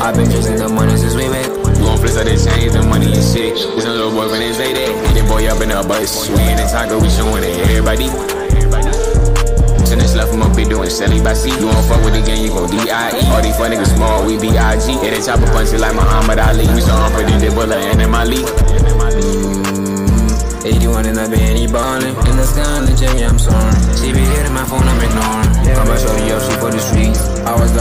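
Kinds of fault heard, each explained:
No technical faults can be heard anywhere in the clip. Nothing in the audio calls for a fault to be named or explained.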